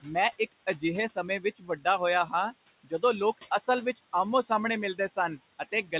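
A noise suppressor lowers the room noise by about 16 dB throughout, so noise artifacts follow the speech, dipping in the gaps and swelling beneath it. Between 0.02 and 1.86 s, 3.38 and 4.5 s, 4.95 and 5.17 s, and 5.59 and 5.93 s, the noise suppressor cuts speech it mistook for noise, by up to about 20 dB, leaving brief stretches swallowed and faint. The room noise sits about 14 dB under the speech, and nothing is heard above 4 kHz, which fits a narrowband call codec.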